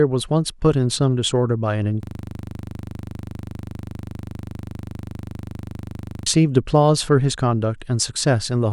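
From 2.03 s to 6.26 s the speech locks into a system hang loop. The computer or driver stopped supplying new audio while the sound hardware kept replaying the same 40 ms stretch of its ring buffer, which points to a buffer of about that size. It repeats roughly a hundred times at 25 Hz, heard as a rough, steady buzz. Unlike packet-loss concealment, which fades or varies as it stretches audio, these repeats are exactly identical and never decay.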